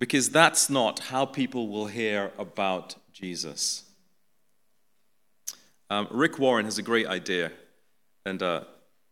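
A speech recording with nothing technically wrong with it.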